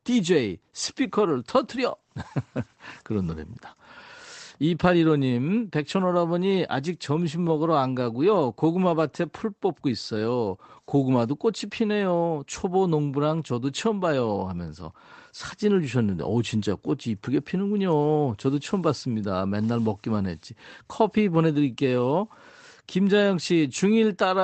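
No technical faults occur at any point in this speech, so there is nothing to describe in time order.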